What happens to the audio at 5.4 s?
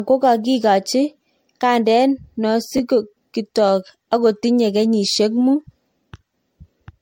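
Generation loss runs through 5.4 s and the whole clip: the speech sounds swirly, hollow and smeared, with blurred attacks and nothing above 16.6 kHz. The likely cause is repeated MP3 re-encoding, around four passes at what fits 64 kbit/s, each quantising on a shifted frame grid.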